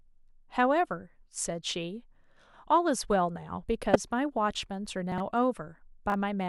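At 3.92 to 3.96 s there is a brief glitch caused by damaged data in the compressed stream. Corrupted bytes made the decoder misread frames, lose sync and resume at the next header. Unlike a dropout or reordering, it comes from the decoder losing its place in the stream.

Chunks play out of order at 5.12 to 5.20 s, where a 20 ms chunk arrives three chunks late, and again at 6.10 to 6.14 s, where one arrives a single chunk late. Each misplaced piece lands after audio that should follow it, so nothing is lost. Instead of a glitch, the sound is a jumbled moment with hard joins.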